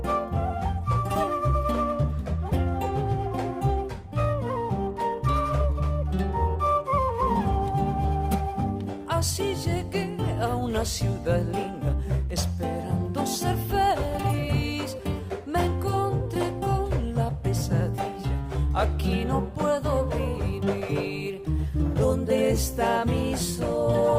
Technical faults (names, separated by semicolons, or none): none